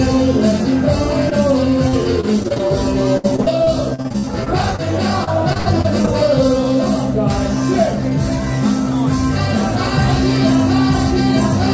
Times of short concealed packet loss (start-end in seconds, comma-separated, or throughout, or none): 1.30-1.33